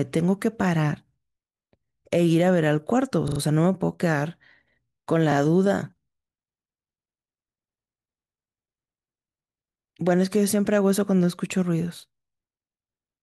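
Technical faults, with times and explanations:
3.28–3.40 s and 5.32–5.36 s, repeated buffer: a short mechanical stutter, with the same 40 ms fragment heard four times in a row at 3.28 s and twice at 5.32 s, each repeat butting against the last with a hard join. New audio arrived late, so the device replayed its last 40 ms buffer; nothing was lost, but the rest of the sound is pushed later.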